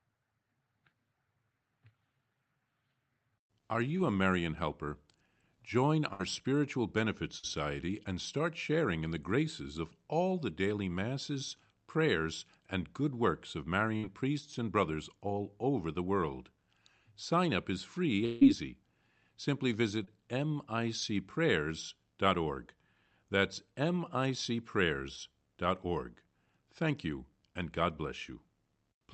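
At 3.97 to 4.01 s, 7.39 to 7.45 s and 20.05 to 20.09 s there is short concealed packet loss. Between about 20 and 40 ms of the speech never arrived in time, and the receiver filled each gap by extending the sound just before it, then blended back. Each one sounds like a quick smear or wobble. On a spectrogram the harmonics run flat and unchanging for that sliver. In the waveform a few cycles repeat almost identically.

The bursts of packet loss at 6.13 to 6.21 s and 13.97 to 14.05 s are longer, about 60 ms of missing audio each. The gap was bridged by continuing the last sound while turning it down, so it comes across as a brief held buzz or hiss that fades before the speech resumes with a piece skipped. A spectrogram shows a smooth, stretched band that dims. The waveform envelope tapers and then jumps back to full level.

From 18.25 to 18.43 s a stretch of about 160 ms is gone, most likely a long network dropout. 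The last sound is drawn out and decays for nearly the whole gap, with no pure silence before the audio returns further along. This shows as a smeared, fading band on a spectrogram and a slowly shrinking envelope in the waveform.

Throughout, the spectrum tops out near 8 kHz, which fits a call codec running at around 40 kbps.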